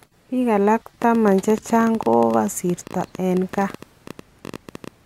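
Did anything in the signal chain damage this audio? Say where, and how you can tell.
Yes. From 1.02 s to 4.89 s a train of clicks runs under the speech, close to twelve per second on an uneven pace, some fifty in all, each a sharp tick of similar shape peaking about 5 dB above the speech and plainly audible in the gaps between phrases. Similar pulses arriving irregularly, independent of the speech, point to electrical interference coupling into the analogue wiring, likely from nearby equipment, rather than to a codec or network fault.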